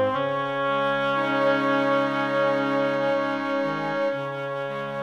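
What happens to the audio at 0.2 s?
Nothing goes wrong at 0.2 s; the audio plays through that moment intact, with no dropout, click or distortion.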